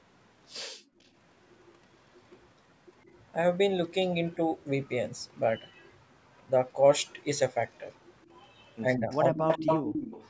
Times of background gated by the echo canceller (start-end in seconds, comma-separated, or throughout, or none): 0.67-0.99